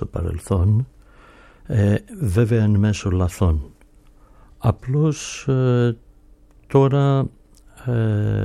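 Nothing is technically wrong with this audio.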